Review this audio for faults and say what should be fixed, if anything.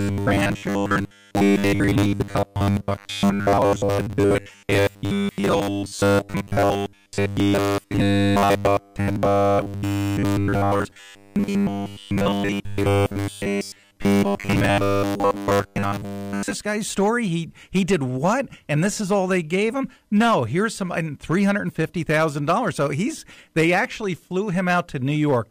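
Harsh crackle rides the loudest speech peaks all the way through: hard clipping, where the level overdrives the stage by about 7 dB and a small share of samples gets cut flat. Set gain so peaks stay below full scale, with headroom to spare.

From 0.01 s to 16.55 s the speech is a rigid, metallic 100 Hz buzz, clearing just before "guy's story". This is robotic sound from repeated short buffers, likely caused by audio arriving too seldom so the last 10 ms gets replayed over most of the missing material. Use a larger buffer or fix the upstream delivery so audio arrives on time.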